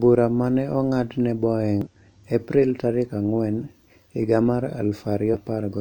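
Damaged data in a compressed stream breaks this speech recording at 1.81–1.88 s and 5.30–5.35 s: corrupted frames lose decoder sync, producing brief glitches.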